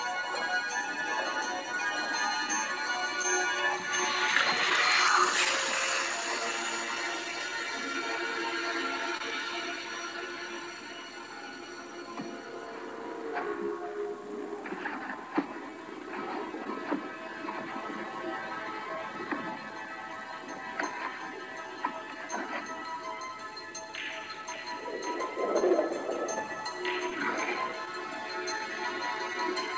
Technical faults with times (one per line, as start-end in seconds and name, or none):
0.00-29.77 clock drift between sender and receiver
0.16-27.78 repeated timing corrections
0.22-6.98 scattered short gaps
9.17-9.22 short stall from a late packet
13.66-16.68 scattered short gaps
25.60-29.36 scattered short gaps